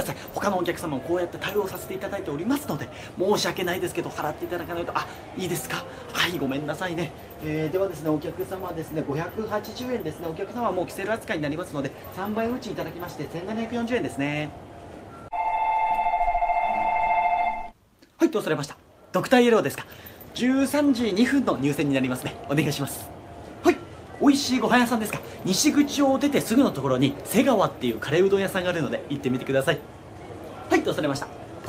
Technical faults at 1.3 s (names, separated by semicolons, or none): none